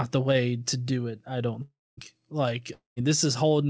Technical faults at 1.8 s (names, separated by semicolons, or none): long network dropout